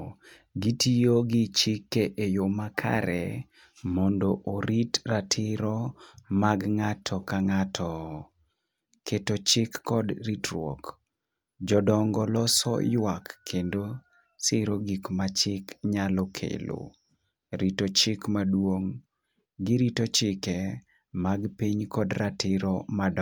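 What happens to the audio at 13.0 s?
Nothing goes wrong at 13.0 s; the speech carries straight through that moment with no audible fault.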